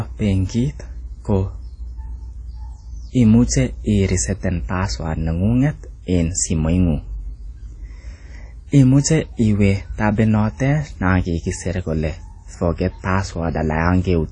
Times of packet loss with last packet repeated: none

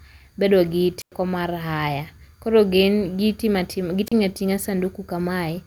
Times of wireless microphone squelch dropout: 0.99-1.12, 4.06-4.12

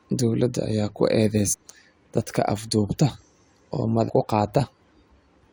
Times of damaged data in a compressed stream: 1.52-1.54, 4.08

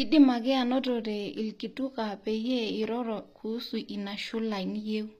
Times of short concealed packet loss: none

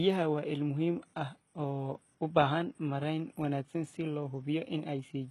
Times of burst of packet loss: none

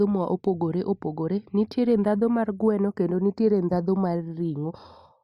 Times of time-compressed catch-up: none

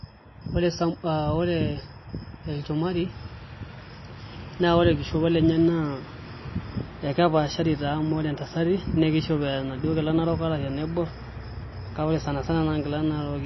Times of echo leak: none

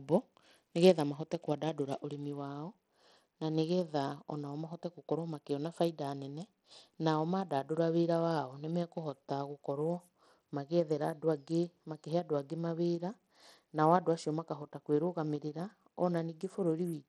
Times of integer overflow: none

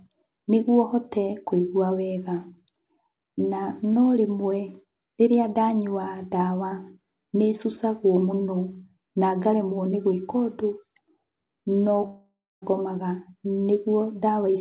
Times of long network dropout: 12.06-12.64

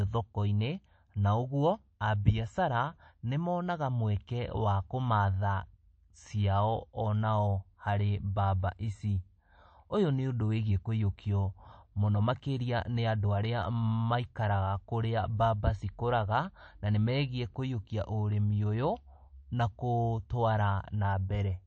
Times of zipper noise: none

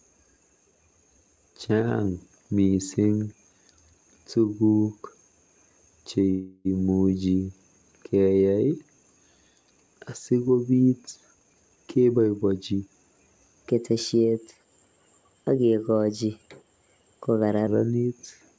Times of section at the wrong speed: 13.69-17.67

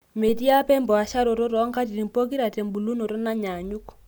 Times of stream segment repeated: none

